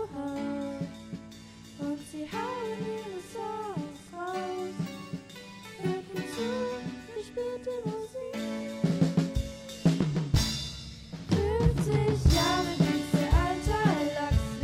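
No audible technical faults turn up anywhere in the recording.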